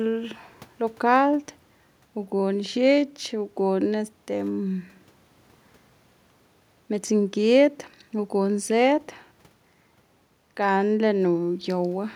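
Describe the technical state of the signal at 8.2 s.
At 8.2 s the speech signal is intact, with no dropout, distortion, or other fault audible at that point.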